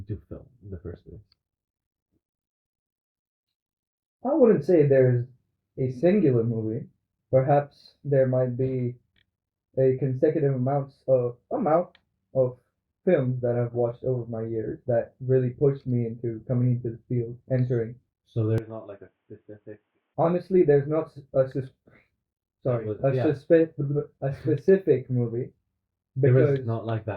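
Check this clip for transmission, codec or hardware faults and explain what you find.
One fault stands out. From 18.58 to 20.14 s, the sound abruptly turns dull and narrow, with nothing above 3.6 kHz, and drops roughly 10 dB in level. There is no gap at the change. The likely cause is the input switched to a poorer device, whose narrower band and own gain take over mid-recording.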